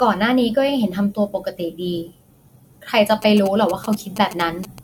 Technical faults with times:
0.00-4.83 generation loss
3.22-4.79 GSM signalling bursts

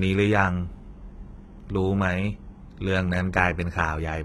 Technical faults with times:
0.00-4.25 HE-AAC compression

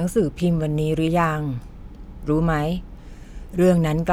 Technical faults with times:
none

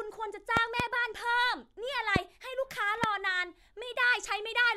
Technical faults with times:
0.57-0.82 loud pop
2.16-2.18 loud pop
3.04-3.06 loud pop

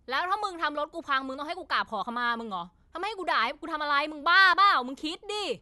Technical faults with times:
none

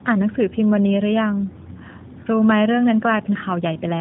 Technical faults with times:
0.00-4.01 tandem speech coding

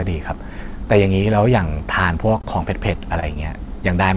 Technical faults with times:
1.78-1.82 short concealed packet loss
2.38-2.42 short concealed packet loss
2.42-2.46 short stall from a late packet
3.20-3.24 short stall from a late packet

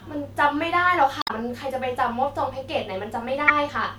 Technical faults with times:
1.19-1.31 damaged data in a compressed stream
3.48-3.50 damaged data in a compressed stream

